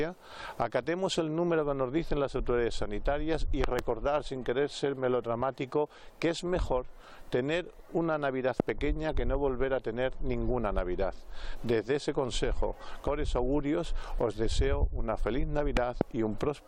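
Loud pops, about 20 dB above the sound, hit at 3.64–3.81 s (double), 8.60–8.62 s and 15.77–16.03 s (double), likely from electrical voltage transients.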